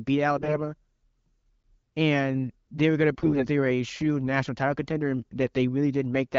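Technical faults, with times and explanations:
0.38–0.57 s and 3.12–3.47 s, AMR bit errors: in both bursts the speech keeps roughly its pitch and loudness but turns hoarse, scratchy and gargly, more heavily in the first, shorter burst. Bits the codec protects less were corrupted while the core bits still checked out, so the excitation pulses and the fine pitch, gain and spectral values decode wrongly. Unlike the light coding damage of the wideband codec, which is constant, this distortion comes and goes in bounded bursts.
1.63 s, block of digital silence: the signal drops to silence for about 8 ms and returns with no fade, so the hard edges at each end produce a tick or small pop rather than an audible gap. The output buffer was likely not filled in time. What sets it apart from a packet loss is that nothing was concealed or smoothed over: the hole is complete silence, and the click comes from the abrupt cut.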